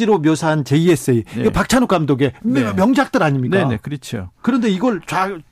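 Hard clipping runs throughout the speech, driven about 4 dB past the limit; under one percent of samples flatten, giving crackle on peaks, flat-topped waveform crests, and spectrogram streaks of high harmonics.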